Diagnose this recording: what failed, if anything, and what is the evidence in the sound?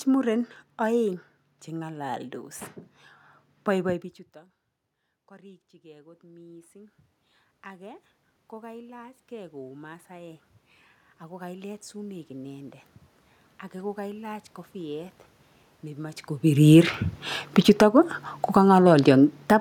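Automatic gain rising in call processing: gain climbs about 21 dB from 5.28 to 16.3 s, swelling voice and room noise together after the level dropped.

Automatic gain falling, same stage: after the voice grows louder near 16 s, gain sinks about 9 dB from 16.49 to 19.56 s, background with it.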